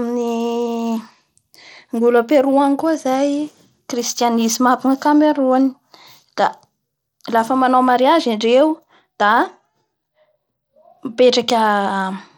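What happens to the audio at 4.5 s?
At 4.5 s the speech carries the same damage as the rest of the clip: dull, flickering treble with a gritty, aliased edge. That's the signature of Bluetooth SBC compression, likely from a low bit pool (it sounds like roughly 96 kbps) starving the upper sub-bands and coarsely quantising the rest.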